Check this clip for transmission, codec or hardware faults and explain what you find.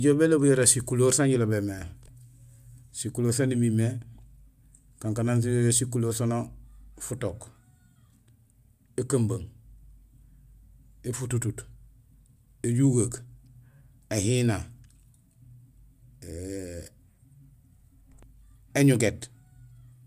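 Nothing in this speech recording points to a fault anywhere along its path. No point in the audio calls for comment.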